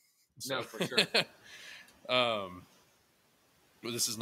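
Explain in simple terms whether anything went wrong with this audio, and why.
The noise suppressor catching up, from 0.98 to 1.31 s. Around the one-second mark the background noise in the room suddenly gets louder. The suppressor, which keeps a running guess of how much noise to remove, is still working from the quieter level, so for about a third of a second the extra noise slips through with little cleanup. Then its guess catches up and the noise drops back down beneath the speech.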